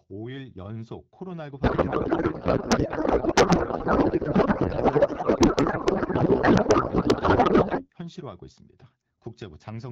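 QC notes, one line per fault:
1.63–7.90 s, codec payload misread: the speech turns to garbled noise and warble that barely follows it. Octet-aligned AMR frames are being unpacked as bandwidth-efficient, so the decoder reads every field from the wrong bits. The clean AMR-WB sound on either side fits about 12.65 kbit/s.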